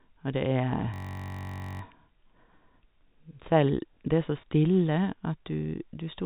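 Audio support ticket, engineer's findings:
System hang loop, 0.94 to 1.81 s: steady buzz at about 47 Hz in place of the speech. One 21.3 ms slice replays exactly, 41 times, which fits a 1024-sample ring buffer cycling while the driver or host stalled. Essentially no audio is lost, since playback resumes where it froze. Distinguished from packet repeat by its length and exact, sustained looping.

Packet loss with last packet repeated, 4.42 to 4.44 s, right after "selv det er så": a single brief blip. One 20 ms packet went missing and the receiver replayed the previous one. Distinguished from a hang loop by its single repeat, followed by a return to new audio. The G.711 mu-law telephone path limits the band to 4 kHz throughout and contributes at most faint coding noise.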